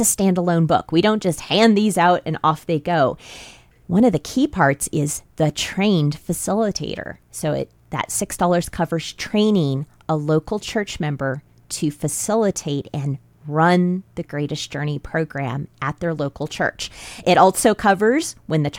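Nothing technical stands out in this speech recording, so there's no fault here to time or trace to a cause.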